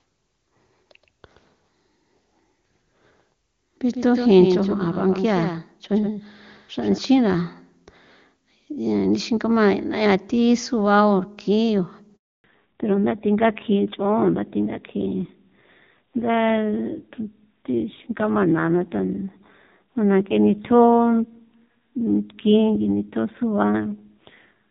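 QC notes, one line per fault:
0.00–6.98 s, doubled audio track: a second full-band copy trails about 150 ms behind at roughly 5 dB lower, dry and cutting off abruptly, likely a slower second capture path.
12.16–12.44 s, handover gap: the speech dies away quickly and leaves 280 ms of silence while the call switches networks, so that stretch of speech is lost.
12.44 s to end, fallback to narrowband: nothing remains above 4 kHz, and the speech turns duller and rougher, which fits a drop from clean HD Voice to a low-rate narrowband codec.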